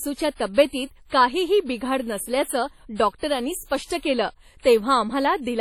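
Speech, and it sounds heavily smeared and washy throughout, with breathing hiss and nothing above 17.1 kHz, likely WMA compression at a low bitrate around 32 kbps.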